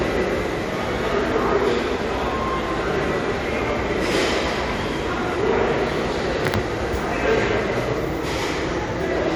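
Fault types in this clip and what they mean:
There are no fault types in this clip.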